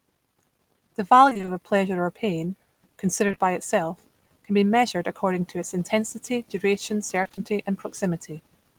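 From 1.29 to 1.49 s the speech turns choppy and robotic: repeated packet loss left holes of up to 20 ms, roughly every 40 ms, each patched by extending the previous sound, so half the stretch is synthetic. A spectrogram shows smeared, frozen harmonic bands alternating with normal texture.

At 3.27–3.39 s there are three back-to-back short concealed packet losses, each 20 ms long. The receiver continued the last sound across each gap and then blended back into the real audio, giving a brief wobble or smear. The waveform shows a smooth, overly regular segment there.

The same repeated packet loss returns from 7.23 to 7.39 s, with gaps of up to 20 ms that again leave half the span concealed and give the same mechanical stutter and striped spectrogram pattern.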